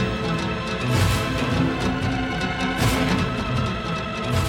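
From 1.85 s to the end, the audio abruptly runs about 1.48 times faster while its pitch stays put, a time-stretched section. It sounds rushed, likely from software compressing the passage by discarding short slices to shorten it.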